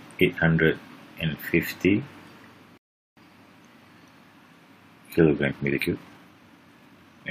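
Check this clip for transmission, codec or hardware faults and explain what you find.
Two faults are present: a playback stall and a sped-up passage.

From 2.78 to 3.17 s there is a rebuffering stall: the player's buffer ran dry, so the audio drops to silence, then resumes exactly where it stopped, adding about 394 ms.

From 5.37 s to the end, a time-stretched section plays 1.54 times faster with pitch unchanged, sounding rushed, likely from software compressing the passage to fit a shorter duration.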